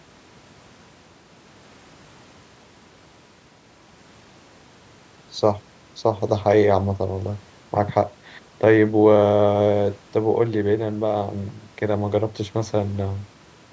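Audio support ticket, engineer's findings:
No faults found in the speech; the call microphone processing behaves as expected, with its high-pass filter trimming the lowest bass and nothing above 8 kHz.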